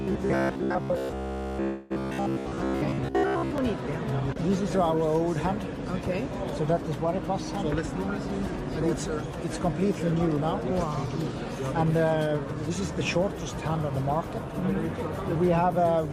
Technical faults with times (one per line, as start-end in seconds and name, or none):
0.01-3.58 robotic sound from repeated short buffers
1.63-1.92 call audio freeze
9.82-10.59 jitter buffer speed-up
11.82-13.17 jitter buffer speed-up
15.41-15.94 jitter buffer speed-up